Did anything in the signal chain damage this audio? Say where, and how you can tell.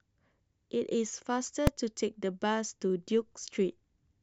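Yes. At 1.67 s in the speech there's a single sharp bang, pinned flat at one extreme value for only about 2.7 ms, which fits a 128-sample block. That's invalid numbers at full scale: a processing stage produced infinite or invalid values, which were clamped to the largest positive or negative value.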